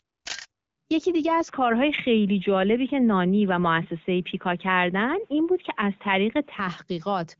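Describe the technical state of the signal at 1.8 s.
At 1.8 s you're inside a stretch from 1.48 to 6.59 s where the speech drops to nothing above 3.8 kHz and turns dull and boxy, with a faint new noise floor. That's most likely the input switched to a poorer device, with no gap or level jump at the changeover, cutting well below the 7.5 kHz the AMR-WB path carries.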